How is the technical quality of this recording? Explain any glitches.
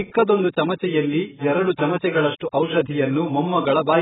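Quality is poor: the speech is band-limited and smeared from start to finish. Nothing comes through above about 3.8 kHz, so it sounds dull and boxy, and sustained sounds and sibilants pick up a warbly, fizzy texture. That's likely heavy AAC compression. At a very low bitrate, something around 10 kbps, an AAC-LC encoder chops off the top end and starves the remaining frequency bands of detail, which leaves spectral holes and that swirly smear.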